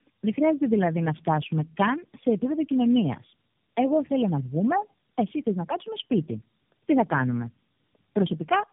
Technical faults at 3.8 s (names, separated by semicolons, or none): tandem speech coding